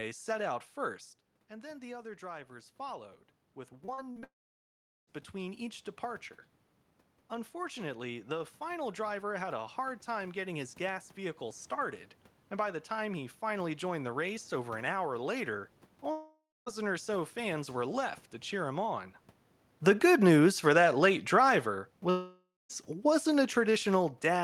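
From 1.48 to 3.09 s, just after "set out first", automatic gain rising follows the talker moving back at about 1 s. The input drops about 11 dB and the gain control climbs about 4 dB, so voice and room noise swell together. A second rise, again about 4 dB against an 11 dB input drop, runs from 3.7 to 6.31 s.

Inside that second rise, repeated packet loss from 3.85 to 4.24 s breaks the sound into robotic, choppy pieces. There are four short holes, the longest 41 ms, and each is patched by stretching the preceding audio. About a third of the span is concealment.

A long network dropout, likely a stall in delivery, follows at once from 4.24 to 5.09 s. About 0.84 s never arrives. A brief fading continuation gives way to roughly 0.77 s of silence before the sound resumes.

From 7.30 to 12.05 s, automatic gain rising lifts the level by about 4 dB, ending just before "and by the time".

From 16.11 to 16.68 s, between "over an hour later" and "or so fans were", a long network dropout, likely from lost network delivery, removes about 0.56 s. 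A fading buzz is followed by about 0.24 s of silence.

Automatic gain falling runs from 19.82 to 21.79 s, after the talker moves at about 19.5 s. The gain drops about 3 dB, pulling the voice and background down together.

From 22.10 to 22.71 s, a final long network dropout, likely a connection stall, loses about 0.6 s. A short concealment tail is followed by about 0.21 s of silence.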